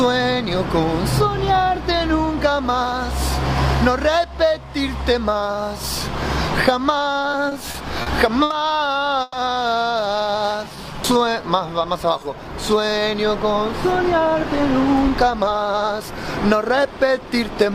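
Between 7.31 and 8.52 s the sound catches repeatedly, a case of repeated stalls (stutter). Packets kept arriving behind schedule, so the jitter buffer ran dry five times in that stretch, and each time the receiver stretched out the last sound until more data came. Those fills add up to 190 ms, about 16% of the span, with the longest lasting 80 ms. Nothing is lost, but the flow jerks forward in small hitches. Several short breaks in a row set this apart from a single freeze.

At 9.22 s comes one isolated hold of 110 ms, ending at 9.35 s. It is a call audio freeze, likely from a brief hold-up of packets that emptied the buffer once. The last sound is carried on as a short buzzy continuation rather than dropping to silence, and playback then resumes exactly where it stopped, now running 110 ms later. It is a single stop rather than a cluster, which separates it from the stutter just before.

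From 10.16 to 12.34 s the audio runs at about 90% speed with its pitch unchanged. This is a jitter buffer slow-down. With its reserve low, the receiver repeated single pitch periods and bits of pauses over and over, adding 217 ms in total. The result is a smooth drag with lengthened sounds and no audible breaks. The absence of breaks distinguishes it from stalling, and the steady pitch distinguishes it from simply playing a recording slowly.

From 14.13 s almost to the end, at 17.71 s, the opposite happens: a jitter buffer speed-up to about 107%. The buffer now held more audio than its target, so the receiver trimmed away short pieces of one or a few pitch periods at a time, about a third of a second in all, to bring the delay back down. Pitch stays put while the pace turns slightly hurried, the mirror image of the earlier slow-down.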